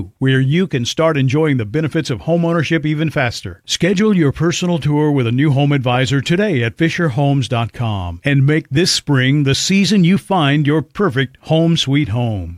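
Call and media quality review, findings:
No faults found in the speech signal; level, timing and continuity show nothing requiring action.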